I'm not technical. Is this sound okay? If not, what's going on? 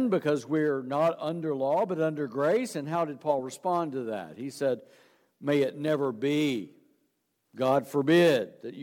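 Yes, this sound is okay, and nothing is going wrong in it.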